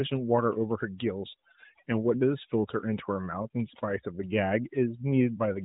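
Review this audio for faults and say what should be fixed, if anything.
Overdone noise removal runs through the whole speech clip. The background has been pushed down, with small twinkling specks where isolated frequency bands flicker on and off, and quiet parts of the voice were cut along with the noise because they sat close to the noise estimate. This differs from the swirling warble of a low-bitrate mobile codec: here the artefacts are sparse, tonal blips against a lowered background, not a continuous smeared texture. The narrowband mobile-codec path, with nothing above about 3.8 kHz and the light coding character of a 12.2 kbps AMR-NB stream, is not at fault. To prevent this, set the noise reduction to a gentler amount and keep a small noise floor instead of removing the noise entirely.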